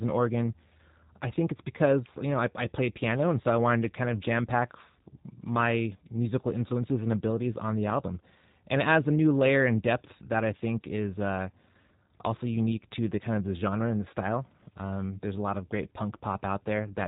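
From start to finish the speech has passed through the G.729 codec, most likely its G.729A form. Instead of keeping the waveform, the encoder sends a vocal tract filter, a pitch predictor and a handful of pulses per frame, and the receiver rebuilds the speech from those. The audio stops at 3.8 kHz, and the damage is plainly audible: a slightly rough, synthetic edge that fits a low bitrate of about 8 kbit/s.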